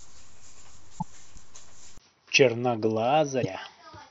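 At 1.98 s the speech stops for about 20 ms, then resumes through what is likely an input switched to a poorer device, and stays that way to the end. From that point nothing reaches above 6 kHz, so the top of the sibilants and the air are gone and the voice turns duller and boxier. The level drops by roughly 5 dB, and a new background noise floor appears, sitting around 50 dB below the speech.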